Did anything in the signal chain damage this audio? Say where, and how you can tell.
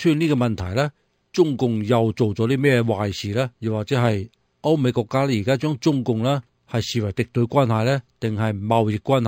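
Yes. The damage sits at the sample-rate conversion stage and runs the whole clip. The audio was raised from 11 kHz to 44.1 kHz by linear interpolation, so there's imaging from linear upsampling: a faint mirrored copy at 5.5 to 11 kHz, around 30 dB down, adds a light metallic shimmer over a dulled top end.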